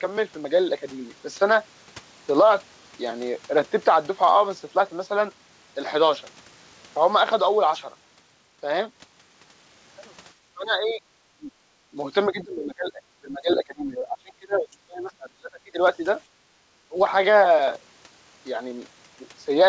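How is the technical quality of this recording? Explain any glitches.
The second half has echo-canceller trouble: the talker keeps getting ducked, and the band stops at 8 kHz, which fits a G.722 call path.

Speech suppressed in double talk, at 10.54–11.51, 12.26–13.02, 13.21–15.81 and 16.88–16.98 s: the voice sinks by as much as roughly 25 dB, likely because the canceller confused it with loudspeaker echo.

Background gated by the echo canceller, 16.26–16.6 s: the room tone drops about 12 dB while the far end plays, then returns when the canceller releases.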